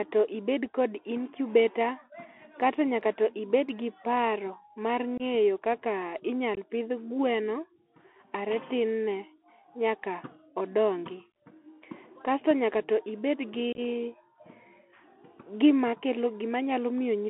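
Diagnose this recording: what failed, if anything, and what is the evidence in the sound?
Narrow, scratchy speech with granular hiss throughout: the Bluetooth CVSD headset codec, passing only 250 Hz to 3.4 kHz and overloading on loud highs.

Abrupt dropouts at 5.18–5.22 s, 6.55–6.57 s, and a scattered burst at 13.73–13.80 s: unconcealed Bluetooth headset packet loss, with lost packets filled by silence or an idle pattern.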